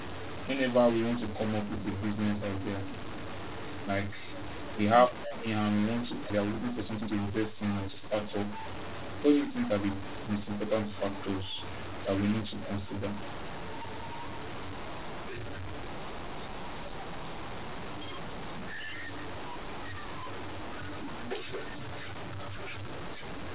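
From the start to the end of the clip, the speech carries a distortion. The pauses are filled with a steady hiss that ought to be silence, and that hiss is what marks this as a stuck bit rather than ordinary clipping or codec noise. One bit of every sample seems held fixed, most likely by a broken data line or converter. That shifts about half the values by a constant step, so even near-silent passages flip noisily around zero. This all sits on narrowband call audio with nothing above 4 kHz, which fits a 64 kbps G.711 mu-law path.

At 6.3 s, right after "and we want to", there is a skip ahead. Playback jumps forward with no gap and no filler, and roughly a second of speech is simply gone, its two sides butted together. Nothing stretches or stutters, so it differs from concealment or a dropout with silence. It fits a jitter buffer that had too much audio queued and discarded a block to catch up.

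From 6.34 s to 8.11 s comes a jitter buffer speed-up. The talker sounds hurried, at about 122% of normal rate, yet the pitch stays where it was. Unlike a resampling error, which would raise the pitch, this comes from the receiver repeatedly cutting out short pitch-period pieces, about 0.4 s in total, to shrink the delay.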